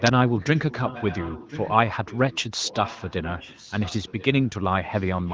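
From 0.28 to 2.42 s and 2.61 to 4.49 s, a delayed copy of the speech trails about 1.03 s behind, roughly 15 dB down, weakening further from 4.84 s on. This echo leak likely comes from a loudspeaker's echo canceller passing sound back.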